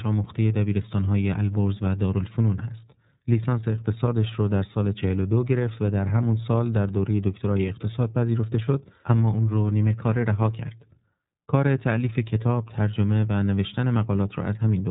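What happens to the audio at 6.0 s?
At 6.0 s the speech carries the iLBC codec damage present throughout: frame-by-frame coding leaves it rough and synthetic, and a spectrogram shows nothing above 3.8 kHz.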